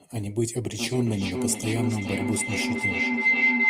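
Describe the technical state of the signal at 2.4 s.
A microphone-to-loudspeaker loop that gains level on every pass causes feedback howl from 0.72 s onward: a tone near 2 kHz, with repeats roughly every 0.4 s, about 7 dB above the speech.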